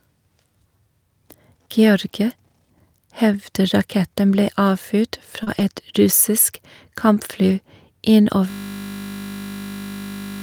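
Speech, with packet loss on the network path and a freeze at the end. Just after "ble avfyrt", around 40 ms of audio failed to arrive in time and was handled by short concealed packet loss: the receiver extended the preceding sound for about 31 ms before blending back, which leaves a brief smear or wobble at 5.43 to 5.49 s. Overlapping that, a lost packet rebuilt from error correction shapes 5.47 to 5.74 s: later packets carried low-bitrate backup copies, and about 80 ms of audio, consistent with four lost packets, plays from those copies, so this stretch sounds rougher and noisier instead of dropping out. The same recovery occurs again at 7.50 to 7.52 s, a single 20 ms frame that briefly turns grainy. From 8.50 s to the end, a system hang loop takes over: the computer or driver stalled while the audio hardware kept replaying its ring buffer, so one 20 ms fragment repeats nearly a hundred times and is heard as a steady 50 Hz buzz rather than speech.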